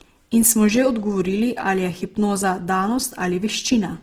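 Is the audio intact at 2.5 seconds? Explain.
No. Opus compression runs through the whole clip, including 2.5 s: the speech sounds rough and grainy, likely from Opus in its music mode at a bitrate around 16 kbps, where starved bands are filled with folded or noise content instead of clean detail.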